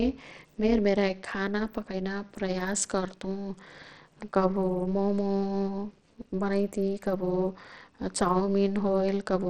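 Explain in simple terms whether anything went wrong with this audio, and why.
Throughout the speech there is a fast, buzzy, robotic sound. This is overlap-add ripple: the sound was chopped into overlapping pieces and rejoined unevenly, so the loudness pulses about two hundred times a second. The treble is also dull and flickering, with a gritty edge, most likely from Bluetooth SBC compression squeezing the sound into too little data.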